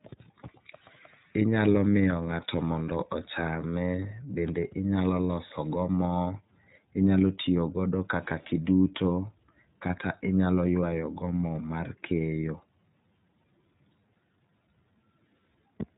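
From start to finish the speech carries iLBC codec damage, and it is plainly audible. Nothing above 3.8 kHz survives, so the sound is narrowband and dull, like a phone line. The codec codes each frame's excitation on its own, without help from the frame before. That leaves a rough, synthetic edge on the speech. The texture points to 30 ms frames, which fits the 13.33 kbps mode.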